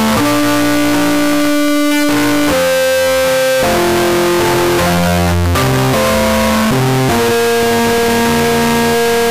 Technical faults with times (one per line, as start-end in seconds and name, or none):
0.00-9.30 float read as integer